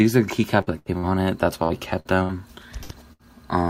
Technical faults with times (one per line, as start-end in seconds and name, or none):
0.61-1.06 burst of packet loss
1.63-1.73 burst of packet loss
2.00-2.32 burst of packet loss
2.83-3.22 burst of packet loss